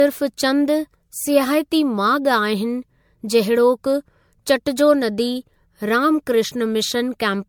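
Generation loss runs throughout the speech: swirly, hollow, with blurred attacks, likely from about seven MP3 re-encodes near 96 kbit/s. The spectrogram shows patchy, accumulated holes.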